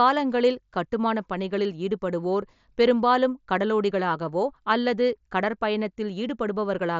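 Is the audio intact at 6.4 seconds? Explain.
Yes, the speech at 6.4 seconds is intact, carried through the Bluetooth mSBC headset codec as a wideband signal with nothing above about 7.6 kHz and no fault at that moment.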